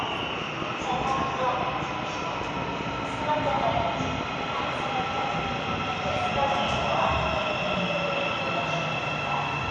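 From 0.03 to 7.75 s a train of clicks runs at a steady 5.1 per second, roughly forty identical pops standing well above the sound. The even spacing and matching shape, unlike random crackle, point to likely interference or a faulty connection or power supply injecting pulses.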